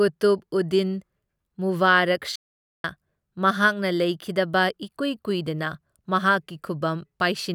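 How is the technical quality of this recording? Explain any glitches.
The recording has one clear glitch, a playback stall. From 2.36 to 2.84 s the speech halts mid-flow and the output drops to silence for just under half a second. The player likely ran short of data or had its playback thread briefly blocked, so nothing reached the output until it recovered and the speech resumed.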